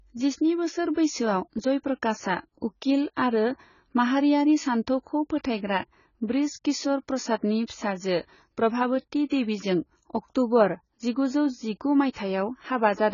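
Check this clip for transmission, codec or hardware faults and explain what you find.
There's one fault here, and it runs the whole length of the speech: AAC compression damage, and it's fairly heavy. Nothing comes through above 7 kHz, so the top end is simply gone and everything sounds dull. Sibilants turn fizzy and smeared, and there's a warbly texture on sustained sounds. The likely cause is an AAC-LC encode at a very low bitrate, something around 16 kbps. At that rate the encoder drops the cut-off and thins out the spectrum to save bits.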